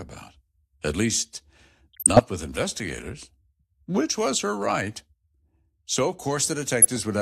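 Between 1.93 and 2.19 s the speech is overlaid with a wet, bubbling chirp, and a shorter squelch of the same kind returns from 6.82 to 6.99 s. This is DAB burbling. Weak reception lets bit errors, roughly a few per thousand bits, slip past error correction into the MP2 stream. Corrupted samples put short blips of noise in single sub-bands, and corrupted scale factors make individual sub-bands leap in level for up to a frame, and the two bursts span 14 and 9 damaged frames.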